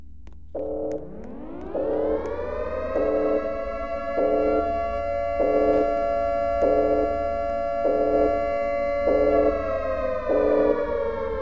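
Nothing is technically wrong with the audio.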